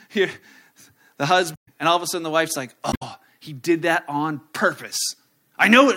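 At 1.53–1.68 s, before "and all of a", and 2.89–3.03 s, between "sudden the wife's like" and "he did", damaged data in a compressed stream makes the decoder lose sync, giving brief disruptions in the sound.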